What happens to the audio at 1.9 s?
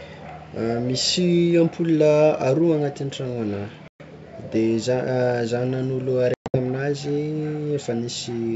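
Nothing goes wrong at 1.9 s: the audio is intact there, carried through G.722 wideband telephone coding at 64 kbit/s.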